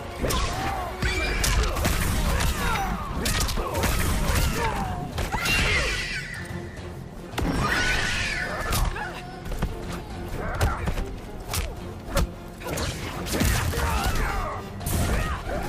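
At 4.58 s the sound jumps ahead, losing roughly 70 ms. Smaller jumps follow at 6.02 s and 13.26 s, about 20 ms each. No gap is heard. These are likely dropped buffers (overrun). Unread samples were overwritten and the edges spliced together.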